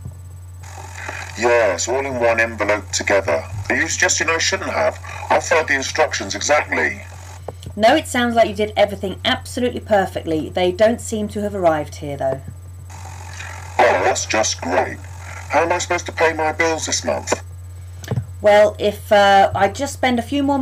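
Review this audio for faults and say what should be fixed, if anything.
No technical faults can be heard anywhere in this audio. Nothing needs to be fixed.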